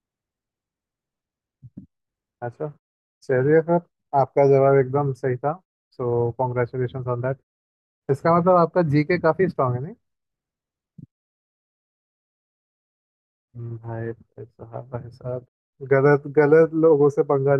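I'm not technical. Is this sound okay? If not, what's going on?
Yes, this sound is okay, and nothing is going wrong in it.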